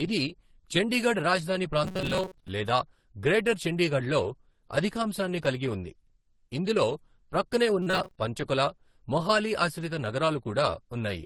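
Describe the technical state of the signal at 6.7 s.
At 6.7 s the speech carries the same fault heard across the whole clip, most likely transcoding between lossy codecs. The sound points to a low-rate Opus stage near 16 kbit/s followed by AAC-LC at around 48 kbit/s. The second encoder spends its bits re-coding the first encoder's artefacts and adds its own. The band stops at the lowest cut-off in the chain, giving a dull, layered sound with the different artefacts heard together rather than a single clean codec signature.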